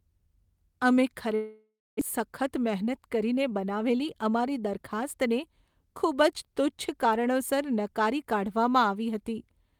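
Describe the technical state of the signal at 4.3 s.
At 4.3 s the speech sounds slightly hurried, running about 7% faster while keeping its normal pitch. This is a jitter buffer speed-up, lasting from 2.28 to 5.03 s. After a backlog of delayed audio built up in the receiver's buffer, it caught up by repeatedly cutting out short slices, each one or a few pitch periods long. Together these slices add up to roughly a fifth of a second removed across the span.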